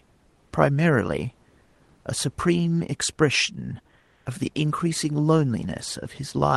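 Speech carried over a call path whose top end stops around 12 kHz. Comfort noise replaces the background in two pauses: 1.63 to 1.75 s (120 ms), where the fill sits about 3 dB below the real room noise, and 3.99 to 4.25 s (260 ms), about 1 dB down. In both gaps the textured room background gives way to a smooth, featureless hiss, likely from Opus discontinuous transmission halting the stream while synthetic noise fills in.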